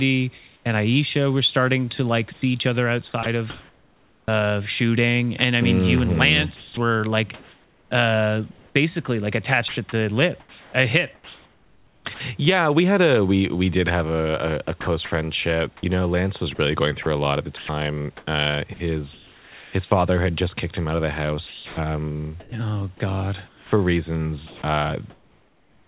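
Right at the start, from 0.38 to 0.65 s, there's comfort noise in place of the background: for about a quarter second the room hiss, sitting about 36 dB under the speech, turns into a smooth, featureless wash at the same level. That's likely the sender going quiet between bursts of speech and the receiver filling in synthetic noise shaped like the room.

From 2.33 to 4.28 s the sound gets chopped by the voice detector, with nearly a second in total swapped for that flat fill, so quiet bits and word edges flicker out. The likely cause is the detector toggling sending on and off.

At 6.56 s the sound is dropped by the voice detector for 0.21 s. Something quiet was likely judged to be background and not sent, so it just vanishes into steady noise. That same gap opens a longer comfort noise stretch running to 8.75 s, where about a second of the real room is replaced by the smooth synthetic version.

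The same choppy pattern comes back from 9.68 to 12.2 s, 14.81 to 19.73 s, 21.47 to 22.52 s, and 23.48 s to the end, each time losing between roughly 0.4 and 1.4 s of sound to fill.

Underneath all of it, nothing comes through above 4 kHz, which fits a G.711 call path at 64 kbps.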